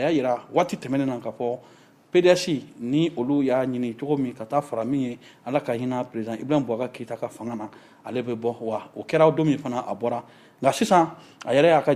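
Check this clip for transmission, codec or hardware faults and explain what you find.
Nothing stood out on listening to this clip.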